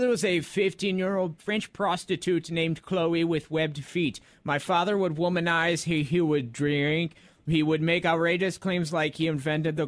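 No technical faults can be heard in the audio, so there is nothing to describe in time order.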